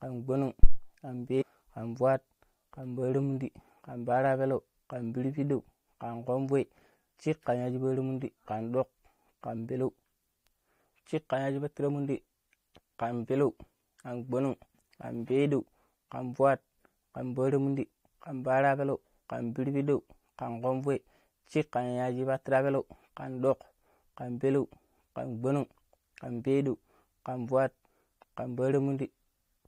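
At 0.63 s a supply, most plausibly phantom power, switches on or off on a live microphone input, and the voltage step passes straight through the coupling capacitors. The result is a phantom power thump, a deep low thud lasting until about 0.81 s and dying away over roughly 39 ms.

From 1.41 to 1.43 s, damaged data in the compressed stream throws the decoder off its frame boundaries, so it discards what it cannot parse and hunts for the next valid header. The speech is briefly disrupted.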